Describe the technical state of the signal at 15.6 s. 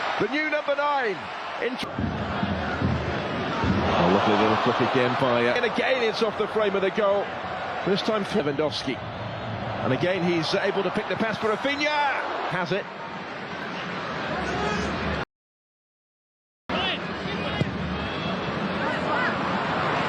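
At 15.6 s the signal is inside a rebuffering stall that runs from 15.24 s to 16.69 s. The player exhausted its downloaded audio and halted playback until more data arrived, so the output drops to silence for roughly 1.46 s. When data returns, playback picks up at exactly the sample where it stopped. No material is skipped or repeated; the stall only inserts that gap of dead air into the timeline.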